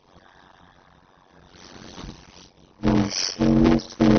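Block size mismatch (padded), throughout the clip: each block of speech is cut short and the remainder filled with silence, which fits 256-sample blocks being read into larger ones. The repeated gaps produce a steady buzz at 91.9 Hz, and the speech runs at 0.533 times normal speed while keeping roughly its normal pitch.

Transcoding between lossy codecs, also throughout: nothing is present above 6.5 kHz, and two different kinds of coding artefact sit on top of each other. The likely cause is AAC-LC coding at a low bitrate, then re-encoding to WMA. That second codec keeps the first codec's artefacts and adds its own, and the lower bandwidth limit remains.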